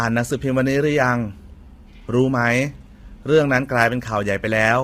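From start to finish the speech sounds rough and grainy, with a hiss filling the gaps between the harmonics and a dulled, artificial top end. The damage is heavy, and the most likely cause is low-delay AAC compression of the kind used in video calls. Too few bits for its roughly 500 frequency lines per frame leave noise between the harmonics, and the starved upper band fits a bitrate of around 24 kbps.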